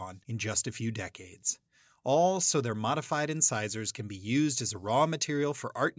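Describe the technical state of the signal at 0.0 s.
Nothing is wrong with the signal at 0.0 s; the speech audio is intact at that point.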